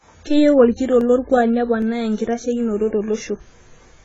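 Throughout the speech, the high end is cut off, and the remaining band is dull and smeared, with a watery, fizzy texture on sibilants. This is likely heavy AAC compression, consistent with an AAC-LC stream at a very low bitrate around 16 kbps.

At 1.01 s and again at 1.82 s, a single sharp click cuts through. Each is the signature of dropped samples, likely a fraction of a millisecond of data missing, so the waveform jumps abruptly to a later value.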